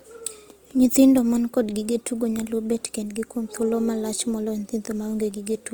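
Opus compression runs through the whole clip, from start to finish. The speech sounds rough and grainy, with a noisy, fizzy texture on tonal parts in place of clean harmonics. This is likely Opus coding in its music mode at a low rate, which fits about 24 kbps. Short of bits, the encoder keeps each band's energy but fills the detail with folded copies of lower bands or noise. The damage is plainly audible, though the band stays full, reaching up to 20.1 kHz.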